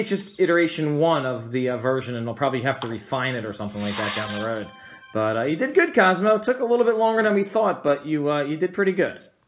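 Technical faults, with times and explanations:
No technical faults can be heard anywhere in this clip.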